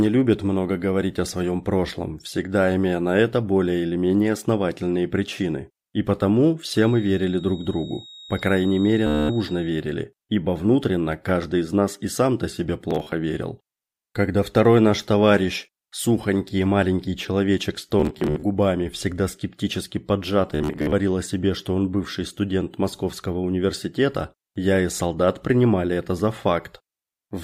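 From 6.61 s to 9.79 s a thin, steady whistle sits behind the sound. It holds at 3.8 kHz, roughly 20 dB below the main signal, and swells and fades slowly in level. This is a feedback whistle. The likely cause is a loudspeaker-to-microphone loop sitting right at the edge of feedback. One frequency keeps ringing but never runs away.

Bluetooth stutter appears four times. The first is from 9.07 s to 9.29 s, overlapping the whistle's tail. About 227 ms of audio is lost as a continuous buzzing repeat. Next, from 12.91 s to 13.12 s, 120 ms drops out in short bursts. The longest burst is 40 ms. From 18.00 s to 18.43 s, 227 ms goes missing in scattered runs, up to 67 ms. From 20.55 s to 20.93 s, 240 ms is lost, with runs up to 53 ms. In each case, data arrived late or not at all. The receiver replayed its last short slice, so the sound takes on a machine-gun rattle. Playback then picks up further on, and the missing audio is skipped.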